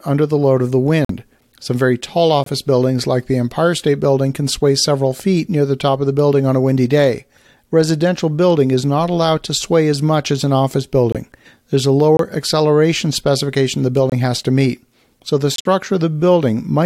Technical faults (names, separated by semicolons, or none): corrupt frame muted